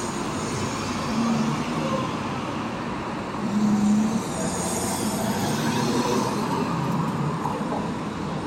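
No technical faults can be heard in this recording.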